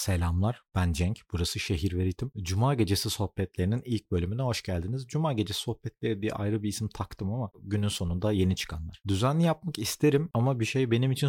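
No technical faults can be heard anywhere in the recording, which stays continuous and stable throughout.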